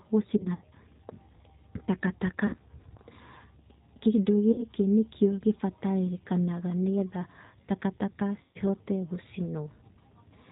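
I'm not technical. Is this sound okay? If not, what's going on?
No. Throughout, the G.729 codec, a phone-call compression system, makes the speech slightly rough and synthetic and dull, not just muffled like a cheap microphone. At 0.37–0.65, 2.47–2.56, 4.52–4.64 and 8.43–8.59 s, VoIP packet loss concealed by the speech codec makes the voice smear into a fading buzz or hiss instead of cutting to silence.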